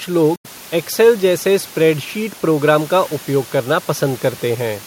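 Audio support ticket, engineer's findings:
Silence 0.36–0.47 s, speech resumes at "एक्सेल जैसे स्प्रेडशीट प्रोग्राम" as if played on; likely Bluetooth dropout, late packets discarded, gap fits about four lost frames.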